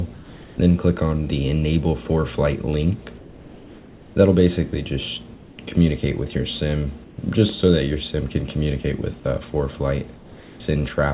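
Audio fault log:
0.14–0.58, 3.18–4.16, 5.34–5.58, 7.04–7.18 and 10.16–10.60 s: comfort noise in place of the background. In each pause, lasting from 0.14 to 0.98 s, the quiet background, about 22 to 24 dB below the loud passages, gives way to a steady, featureless hiss about 2 to 3 dB lower, confined like the rest of the audio to below 4 kHz. The likely cause is discontinuous transmission, with the receiver synthesising noise shaped to match the background.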